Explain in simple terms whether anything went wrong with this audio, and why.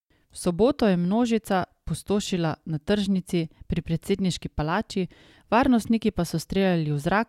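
Nothing went wrong with this speech recording; no technical fault can be heard anywhere in it.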